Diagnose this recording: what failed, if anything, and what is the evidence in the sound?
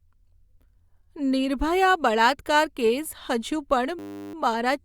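System hang loop at the driver or buffer stage. From 3.99 to 4.34 s, the frozen driver let the hardware replay one 10 ms buffer, producing a steady 100 Hz buzz.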